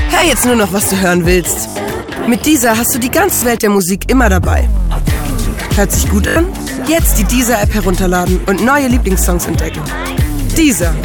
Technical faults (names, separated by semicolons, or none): repeated buffer; loud pop